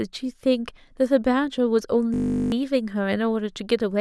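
From 2.14 to 2.52 s the speech freezes into a system hang loop: a 20 ms buffer repeats, producing a steady 50 Hz buzz while roughly 0.4 s of audio is lost.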